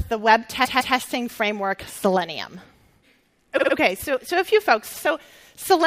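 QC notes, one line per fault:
0.64–0.96 s, repeated frames: a 157 ms stretch of sound plays twice more, heard as a stutter. The decoder received the same compressed frames again, adding 0.31 s.
3.57–3.72 s, repeated frames: a 52 ms block repeats three extra times in quick succession, heard as a stutter. Duplicated frames reached the decoder, adding 0.16 s.
4.93–5.03 s, repeated frames: a 105 ms block plays once more, heard as a brief stutter. The same frames were decoded twice, lengthening the audio by 0.10 s.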